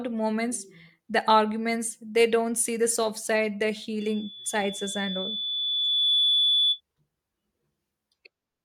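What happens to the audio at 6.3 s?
At 6.3 s you're near the end of a loudspeaker feedback squeal that runs from about 4.00 to 6.81 s, starting right after "the soft side the". The mic is picking up its own speaker, and at 3.5 kHz the loop gain tips past one, so that single tone keeps feeding itself. It swells over roughly two seconds into a squeal that sits a few decibels above the speech, then cuts off just after 6.8 s.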